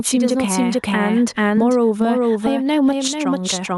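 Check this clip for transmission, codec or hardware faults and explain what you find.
Two faults run through the whole clip. The speech is doubled, and the level pumps.

The doubled audio track lasts from start to finish. A second full-band copy of the speech trails the original by roughly 0.4 s. It sits around 5 dB lower. The copy has no decay and no room colour, so it sounds like a clean repeat rather than an echo. The likely cause is the same signal reaching the mix twice, once through a slower path.

Gain pumping is also present throughout. The swing is about 10 dB. Loud and quiet passages end up close in level, and the speech sounds squashed. This likely comes from input gain set far too high, with a fast limiter or compressor clamping down on every peak.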